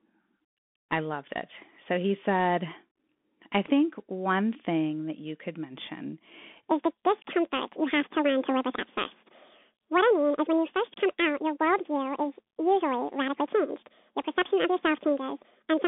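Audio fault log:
throughout: Bluetooth CVSD headset codec. The band is confined to roughly 200 Hz to 3.5 kHz, and sibilants sound scratchy over a constant granular hiss. Loud high-frequency passages outrun the adaptive step of the one-bit delta coder and distort, which fits a 64 kbps CVSD headset link.
6.70 to 15.88 s: section at the wrong speed. From just after "that you could mention" to the end, playback runs 1.84 times too fast, so speech is hurried and pitched up by about ten semitones, likely from resampling to or playing against the wrong clock rate.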